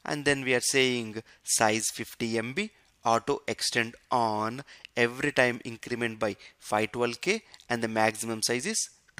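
No technical faults are audible anywhere in the recording.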